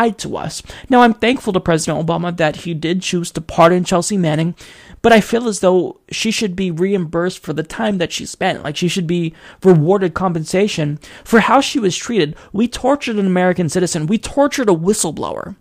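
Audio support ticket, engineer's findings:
No faults found in recording.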